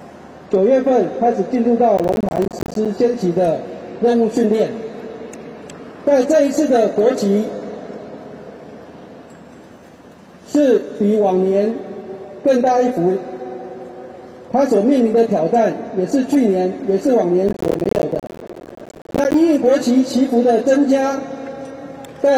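Processor overload crackle occurs from 1.97 to 2.86 s and again, longer, from 17.48 to 19.34 s. Dozens of roughly 10 ms buffers miss their deadlines, each leaving a hard-edged silent gap, heard as gritty tearing crackle over the sound.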